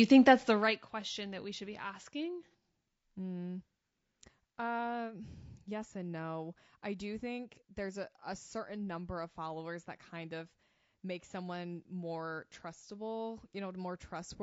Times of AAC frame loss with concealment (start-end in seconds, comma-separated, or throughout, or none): 2.52-2.54